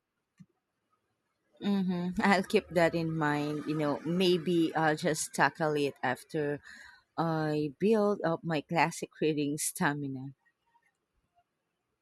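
Near the end, from 11.63 to 11.71 s, two neighbouring runs of frames were delivered and decoded in swapped order, producing frames out of order. Each run lasts about 42.7 ms, consistent with two frames apiece, so the later slice of speech plays before the earlier one. The result is a brief garbled flutter. Nothing is dropped, so the timing stays intact.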